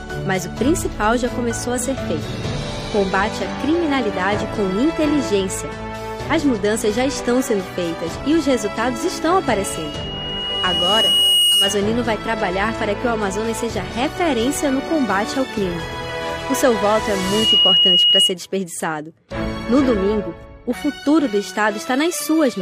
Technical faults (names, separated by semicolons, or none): loudspeaker feedback squeal